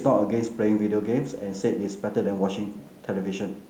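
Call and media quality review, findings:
No faults found in the speech clip; nothing audible to attribute to capture, transport or playback.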